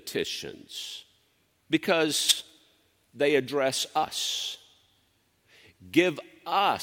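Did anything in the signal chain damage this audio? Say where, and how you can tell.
Yes, at the codec. Compressed frames were skipped at 2.28 to 2.33 s and at 4.03 s. The speech jumps ahead about 40 ms, then about 100 ms.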